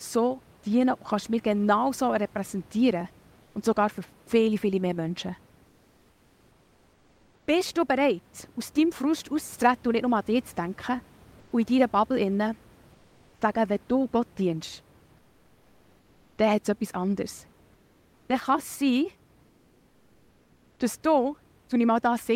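Likely Opus discontinuous transmission halts sending during speech pauses in this speech recording. The receiver substitutes comfort noise in place of the background at 3.43–3.55, 5.69–7.47, 11.39–11.51, 12.93–13.41, 15.17–16.37, 17.73–18.29 and 19.47–20.79 s. The genuine room noise, about 33 dB below the speech, turns into a flat, featureless hiss about 1 to 4 dB quieter.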